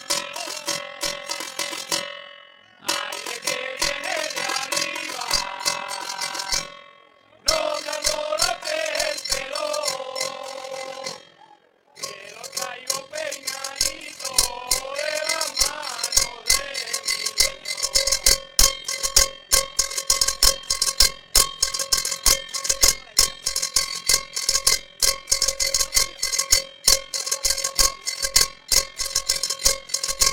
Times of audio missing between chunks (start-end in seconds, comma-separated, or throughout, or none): none